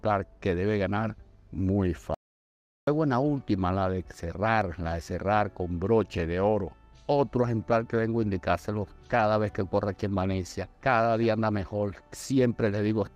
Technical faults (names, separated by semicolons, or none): audio dropout to silence